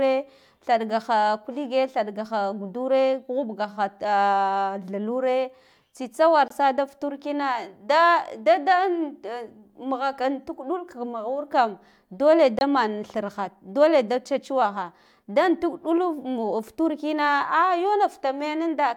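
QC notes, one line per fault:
6.48–6.52 s and 12.59–12.62 s, corrupt frame muted: the speech cuts to dead silence for about 40 ms, then resumes on time. The first gap points to one damaged frame and the second to two, which the decoder rejected and the player filled with silence. On a waveform each appears as a flat line with hard vertical edges. A spectrogram shows a clean blank column across all frequencies, with no smearing and no shift in timing afterwards.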